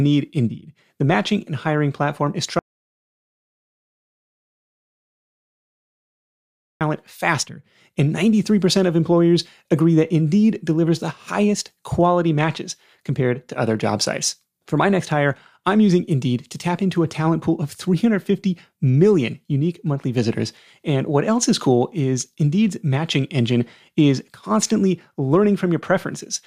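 At 2.59 s, just after "and hiring platform is", the speech cuts out mid-flow. Silence follows for about 4.2 s, with no room tone. It returns at 6.81 s. This is an audio dropout to silence. The input was likely lost, and silence was written in its place.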